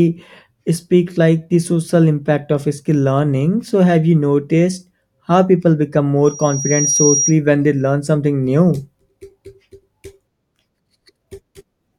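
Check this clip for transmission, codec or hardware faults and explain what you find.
One hardware fault is present: loudspeaker feedback squeal. It runs from 6.25 to 7.35 s, between "people become" and "when they learn something". A microphone is picking up its own loudspeaker, and at 5.7 kHz the loop gain exceeds one. A thin tone swells over roughly 0.7 s to about the level of the speech.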